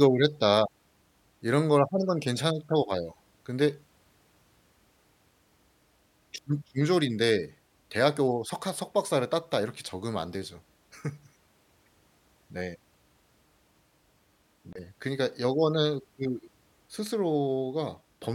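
At 14.73 s the speech is broken by a CD skip: a knock or a disc flaw threw the laser onto another turn of the spiral, so the player went quiet for roughly 30 ms and resumed from another point. It is heard as a brief tick or short gap followed by an abrupt jump in the speech. Unlike a digital dropout, which leaves a gap, the sound carries on, displaced by one or more disc rotations.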